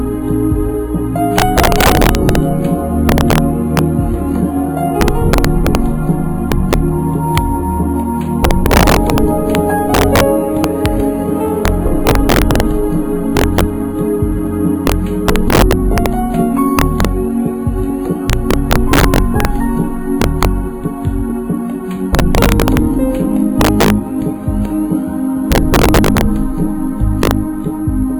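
Violent, sharp cracks burst out on the loudest moments across the whole clip, far harsher than ordinary clipping. This is integer overflow: the signal was driven about 8 dB too hot, and around one percent of samples wrapped to the opposite sign instead of being limited.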